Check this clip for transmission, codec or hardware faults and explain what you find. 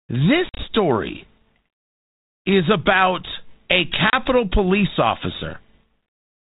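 Two bursts of packet loss on an ADPCM call stand out. The first runs from 0.49 to 0.64 s. About 80 ms is lost in several gaps spread over 100 ms, the longest 50 ms. The second, at 4.10 to 4.15 s, comes right after "is about a" and drops 30 ms. Each gap is hard-edged silence. The decoder's predictor and step size lose step with the sender's. Sound then returns slightly distorted, settling within tens of milliseconds.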